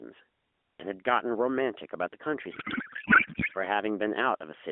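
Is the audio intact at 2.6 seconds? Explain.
No. At 2.6 seconds the clip is inside a codec payload misread lasting from 2.52 to 3.58 s. The speech is replaced by garbled noise and warble that barely tracks it. The decoder is reading the AMR frames with their bits packed differently from how they were sent, so every field lands in the wrong place. The sound fits octet-aligned AMR being read as bandwidth-efficient. Around it, the narrowband AMR speech comes through with only light coding damage.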